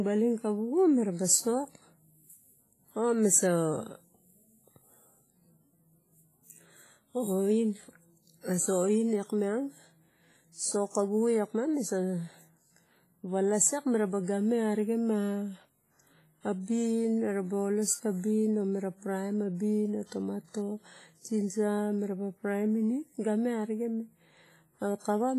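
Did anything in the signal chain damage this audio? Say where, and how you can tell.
Yes. WMA compression damages the whole speech clip at the codec stage. Heavy codec damage gives a ringing, washy hiss that breathes with the signal, and nothing remains above 15.3 kHz. This likely comes from a WMA transform encoder at a low bitrate, around 24 kbps, that smeared quantisation noise across long blocks and zeroed weak spectral lines.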